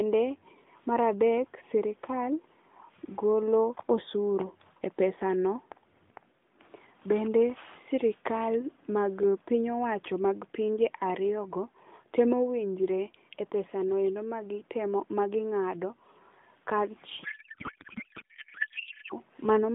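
From 17.24 to 19.14 s, a codec payload misread: AMR frames packed octet-aligned appear to be unpacked as bandwidth-efficient, so every field lands in the wrong place. The speech turns to garbled noise and warble that barely tracks it, running to the end of the fault.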